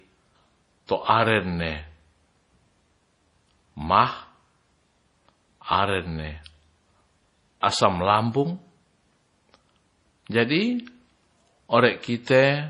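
Speech, likely squeezed through MP3 encoding at a starved bitrate, which fits a stream of about 32 kbps: the encoder has cut everything above 10.4 kHz and dropped weak frequency lines frame by frame, so the voice sounds dull, watery and swirly, with heavy codec damage overall. A block-based transform spread its quantisation noise back across the quiet moment ahead of a sharp attack, producing pre-echo, a short hiss of about 24 ms from 7.61 to 7.63 s that softens and smears the onset.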